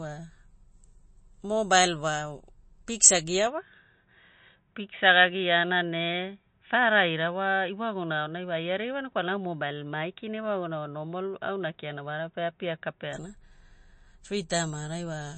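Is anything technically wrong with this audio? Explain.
Yes, there are two problems. Throughout the clip the speech has a watery, swirly quality with nothing above 8.4 kHz, and it's plainly audible. That's likely MP3 compression, and the damage fits a low bitrate of about 32 kbps. With so few bits, the encoder chops the treble at a fixed point and drops weaker frequency lines, which flicker in and out from frame to frame. That flicker gives the swirl, and it smears the crisp edges of consonants.

Then, right after "mobile wa piksa" at 3.47 s, the sound abruptly goes dull and boxy, with everything above 3.8 kHz gone, until it opens up again at 13.13 s. There's no gap at either change and the loudness stays about the same, but a faint new noise floor comes in, roughly 50 dB under the speech. That points to an input switched to a poorer device, likely a headset's call profile or another narrowband mic, with its own tone and background noise.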